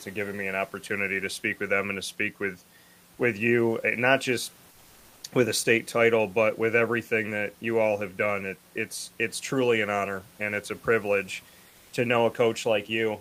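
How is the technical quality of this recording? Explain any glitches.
One glitch stands out. At 11.69 to 11.91 s, just after "and it's a privilege", there is comfort noise in place of the background. The sender likely stopped transmitting during the pause through Opus discontinuous transmission, and the receiver filled the 0.22 s gap with synthetic noise. The room noise, about 33 dB below the loud parts, gives way to a smooth, featureless hiss at the same level, and its natural texture returns when the sound resumes.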